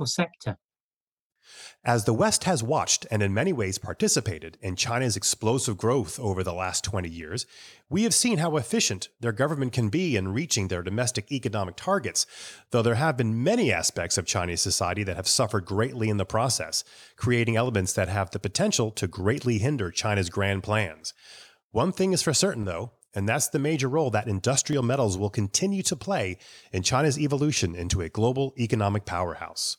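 A brief gap in the sample stream, most likely dropped samples, recurs at 0.47, 4.21, 7.21, 22.63 and 24.73 s. Each time, about 0.7 ms of audio goes missing, so the waveform leaps straight from one value to a later one with no transition. Far too short to remove any of the speech, each break is heard as a single sharp click and would show as a thin vertical line across the spectrum.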